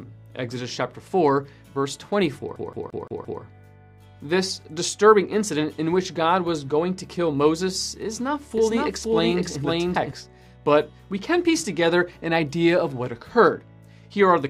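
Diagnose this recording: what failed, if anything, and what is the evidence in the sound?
Playback off a damaged disc is the first failure, a CD stuck on one turn. From 2.56 to 3.42 s the same 172 ms slice repeats five times, each pass cut off by a tiny mute as the player jumps back. That fast, perfectly even stutter is the giveaway: a scratch keeps kicking the laser back one track at the same spot each revolution, so the audio loops instead of advancing.

Between 8.58 and 10.12 s there's a doubled audio track. A second full-band copy trails the original by about half a second at roughly the same level, with no decay or room colour, so it isn't an echo or reverb. It switches in and out abruptly at those edges. The likely cause sits in capture or editing: the same signal recorded again through a slower path, or two copies left out of step in the edit.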